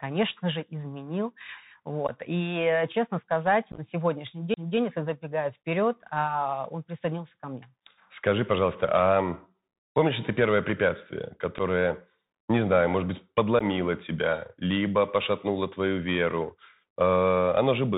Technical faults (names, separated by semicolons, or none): Bluetooth CVSD headset codec; unconcealed Bluetooth headset packet loss; CD skip